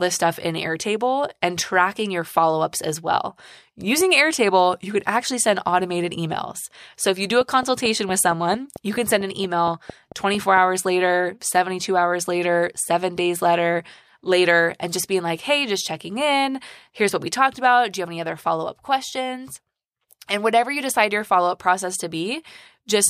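Right after "if you do", from 7.41 to 10.58 s, there's a train of clicks: about fifteen evenly spaced pops at roughly 4.4 per second, poking a little above the speech and ticking through the pauses. Likely interference or a faulty connection or power supply.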